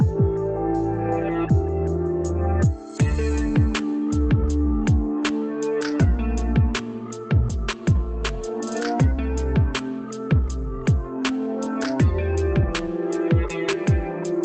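No technical faults are audible.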